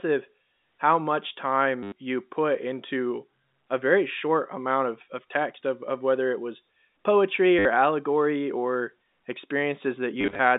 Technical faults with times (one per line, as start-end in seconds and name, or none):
1.83-1.92 packet loss with last packet repeated
7.59-7.65 packet loss with last packet repeated
10.21-10.39 packet loss with last packet repeated